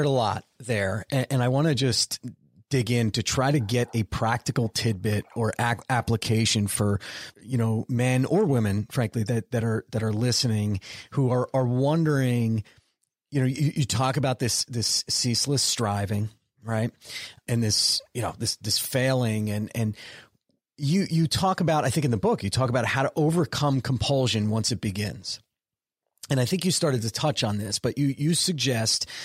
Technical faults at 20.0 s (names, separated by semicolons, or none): chunks out of order